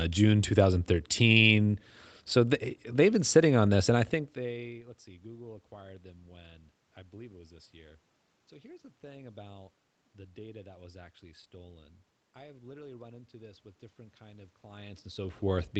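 No technical faults can be heard in this speech recording. The sound carries nothing above 8 kHz, which fits a call path band-limited for transmission, and the level shifts around 4 s and again near 14.5 s, as a talker moving relative to the microphone would cause.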